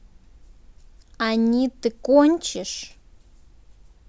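No faults are audible anywhere in the recording.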